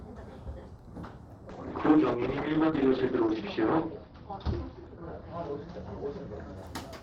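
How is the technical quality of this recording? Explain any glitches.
Quality is impaired by one fault. From 1.5 to 6.63 s there is a call bitrate drop: the encoder was starved of bits, which fits a fall from roughly 64 to 11 kbps, so it coded coarsely and cut the top end from 20 kHz to 6 kHz. The sound turns rough and muffled, worst for about 1.8 s.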